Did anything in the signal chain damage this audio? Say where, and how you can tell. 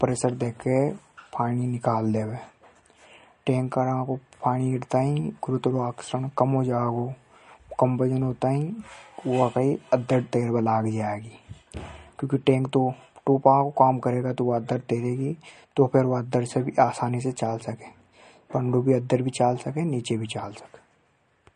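Yes. Throughout, the speech has no content above 10.6 kHz and a watery, swirling quality on sibilants, which points to the codec stage, likely MP3 compression at a low bitrate around 40 kbps. The encoder cut the treble and dropped weak spectral lines, which flicker between frames.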